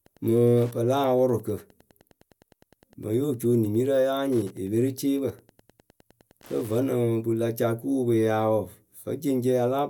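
From the start to 6.93 s there's Wi-Fi interference: a nearby radio's beacon, every 102.4 ms, gets rectified by the audio circuit, giving a faint steady tick about ten times a second, well down under the speech, until just before "pɨ la ca".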